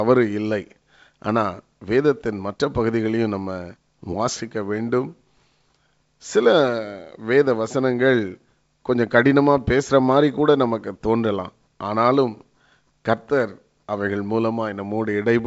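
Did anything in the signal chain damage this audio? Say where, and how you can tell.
No, nothing in the chain damaged this speech: it passes through G.722 wideband telephone coding, which accounts for the band stopping near 7.7 kHz and leaves at most a faint trace of coding noise, consistent with the codec's full 64 kbit/s mode.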